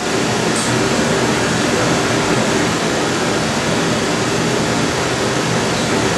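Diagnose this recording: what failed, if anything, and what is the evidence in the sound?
No stage failed; nothing in the recording points to a fault.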